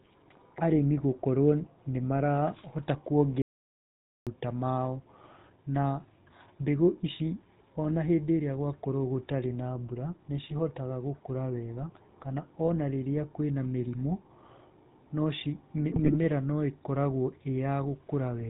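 GSM full-rate codec coding runs through the whole recording, and the damage is plainly audible. The speech has been squeezed through a vocal-tract model driven by a coarse, regularly spaced pulse excitation, which fits the 13 kbps full-rate GSM codec. Nothing survives above 4 kHz, so the voice sounds dull and boxed-in. Over that sits the buzzy, gravelly roughness typical of this codec, a grainy edge that clings to every voiced sound.

An audio dropout to silence runs from 3.42 to 4.27 s, removing about 0.85 s of speech. The sound cuts off mid-flow and returns just as abruptly. The gap is silent with no room tone or codec hiss left underneath, so whatever was said there is simply gone. This points to the input signal being lost, likely through a link failure or momentary disconnection, while the recorder went on writing silence.

GSM bit errors break into the speech twice. The first burst, from 12.65 to 12.72 s, is brief. 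The second, from 15.92 to 16.17 s, is longer. Corrupted bits reached the decoder and scrambled the filter, pitch and gain parameters for a run of frames. This sounds like squawks, pops and a wet gargling that briefly distorts the spectrum and jolts the level. The longer second burst fits a higher error rate spread over many consecutive frames.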